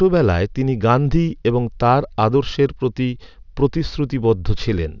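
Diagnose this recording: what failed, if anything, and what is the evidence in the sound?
Aliasing runs throughout, from the sample-rate conversion stage. Sibilants turn gritty as energy above 6 kHz folds back as faint false tones roughly 30 dB down, which fits an unfiltered 48 kHz to 12 kHz downsample.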